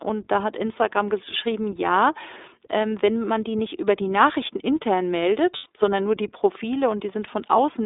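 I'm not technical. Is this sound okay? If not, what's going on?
No. The whole recording passes through the iLBC codec, a phone-grade voice compressor that keeps only roughly 250 Hz to 3.7 kHz, so the speech sounds narrow, slightly rough and synthetic.

From 5.56 to 5.66 s there are lost iLBC frames, about 100 ms of missing data. The decoder fills the gap by repeating the last bit of voice, heard as a brief buzzy held vowel before speech snaps back.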